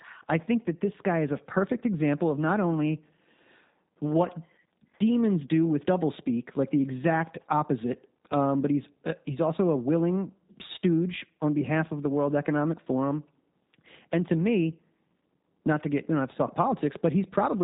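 Throughout the speech, the sound carries G.729 codec damage. Content above about 3.8 kHz is gone, and the speech is rebuilt from a vocal tract model with sparse pulse excitation, leaving it audibly rough and synthetic. This fits G.729A running at 8 kbit/s.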